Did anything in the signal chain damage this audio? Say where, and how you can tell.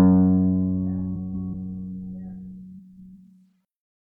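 Yes. Frames were out of order somewhere in transport: two neighbouring blocks of the music stream reached the decoder swapped and were played that way, once from 1.15 to 1.55 s and again from 2.78 to 3.15 s. Each swapped half runs about 186 ms, which fits runs of four frames. Within each stretch the passage plays back-to-front by halves, a garbled flutter, yet the overall timing stays intact.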